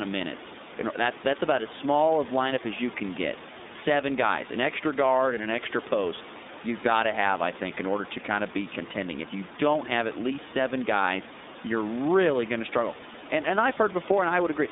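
Speech recorded with room noise about 15 dB below it runs through the iLBC codec for the whole clip. The band stops near 200 Hz and 3.7 kHz, and the voice has a plainly audible rough, synthetic grain, which fits iLBC's 13.33 kbps mode with 30 ms frames. A simple telephone band-limit would only sound muffled. Here each frame is coded on its own, so the texture is granular and the background noise is coded poorly.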